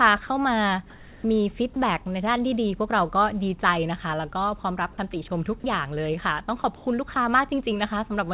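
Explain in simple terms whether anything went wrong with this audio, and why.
Two kinds of fault can be heard, both tied to how the call handled pauses.

From 0.9 to 1.24 s, and again from 6.76 to 6.86 s, there is comfort noise in place of the background. The real room sound turns into a flat, featureless hiss. The first patch is slightly louder than the real background, and the second slightly quieter. The likely cause is that the sender stopped transmitting during the pause, so the receiver made up filler noise.

There are four brief gaps where sound was dropped by the voice detector: 1.74 to 1.76 s, 5.6 to 5.64 s, 6.62 to 6.64 s, and 7.14 to 7.16 s. Each time, a sliver of quiet sound is swapped for steady noise. The likely cause is the detector mistaking faint sound for silence. The call's narrow sound, with nothing above 4 kHz, comes from its phone-style codec.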